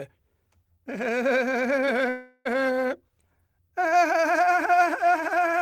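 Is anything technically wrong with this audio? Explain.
Yes, the music has two transmission faults. From 1.85 to 1.89 s, a short concealed packet loss: about 20 ms never arrived, and the decoder extended the preceding sound, leaving a brief smear rather than a gap. From 2.09 to 2.47 s, the last sound is drawn out into a fading buzz for nearly the whole stretch without dropping to silence, likely a long network dropout. It is set apart from the first by its length, about 360 ms missing.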